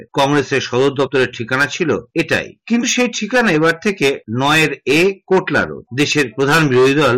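The audio is hard clipped from start to finish. It is driven about 8 dB past what some stage in the chain can pass, so its peaks are sliced flat. Roughly 7 percent of the samples sit at that ceiling. The flat tops create harmonics high in the spectrum, heard as a harsh fuzz on every loud moment. There are also two short jumps from compressed frames skipped, at 1.06 s and 2.82 s. At each one, about 50 ms of audio goes missing, which points to two lost frames of about 23.2 ms each. The decoder either never received those frames or rejected them as damaged.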